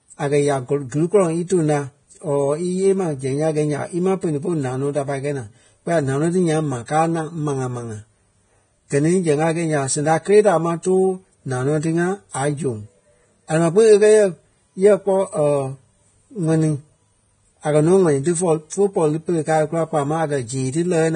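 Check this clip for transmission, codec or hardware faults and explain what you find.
One codec fault runs throughout. The speech sounds like Vorbis compression, likely at around 22 kbps. Nothing sounds above 9.7 kHz. Coarsely quantised treble becomes grainy hiss.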